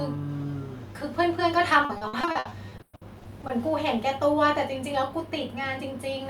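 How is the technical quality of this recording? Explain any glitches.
The recording has one clear fault: a stretch of choppy speech from 1.85 to 3.51 s. This is repeated packet loss (robotic sound). About sixteen short holes fall in quick succession, the longest 120 ms. Each is patched by stretching the preceding sound, covering roughly a third of that span. The repeated fill gives a choppy texture with fragments missing. A single dropout is one isolated gap; here the holes recur rapidly, so the speech turns choppy across the span.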